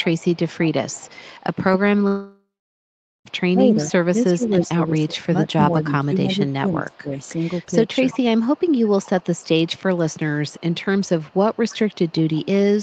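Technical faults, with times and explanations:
0.00–4.51, 6.47–6.53 and 7.08 to the end, echo leak: there's a faint delayed copy of the speech trailing about 330 ms behind, sitting well down, roughly 25 dB under the talker at first and more like 30 dB under in the later stretches, plus a brief blip around 6.5. It's most likely the far end running a loudspeaker whose echo canceller didn't fully scrub what its mic picked up, so that residue came straight back down the line.
2.07–3.27, long network dropout: about 1.18 s of audio just never arrived. The receiver tries to bridge the gap by stretching the last bit of sound into a fading buzzy tail, then gives up, and you get roughly 0.8 s of near-silence before speech resumes further along with that chunk gone for good. That pattern points to a likely run of lost packets rather than anything at the mic.
3.52–7.38 and 8.13–8.19, speech suppressed in double talk: the talker's level keeps dipping while the other side is also talking, adding up to around two seconds of ducking in the first stretch, at worst by something like 20 dB, plus a short, milder dip of about 10 dB near 8.1. 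The likely cause is the echo canceller failing to tell its own talker from the loudspeaker echo and clamping both down together.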